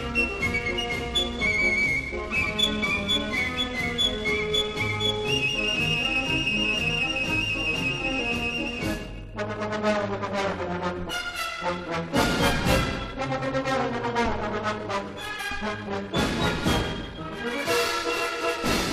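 Damaged data in a compressed stream produces four brief glitches in this audio, at 1.45, 8.19, 11.09 and 15.38 s, each lasting about 20 ms and heard as a short chirp or blip. At these points the encoded bytes arrive corrupted or missing, so the decoder misreads the affected frame, loses its place in the bitstream, and must hunt for the next valid frame header before clean playback resumes.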